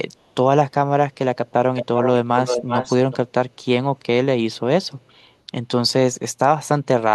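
From 1.75 to 2.1 s and 2.37 to 3.17 s, an echo leak sends back a copy of the speech 379 ms late, only slightly quieter. A far-end echo canceller likely missed loudspeaker pickup. Unlike room reverb, it is a separate delayed repeat, not a smeared tail.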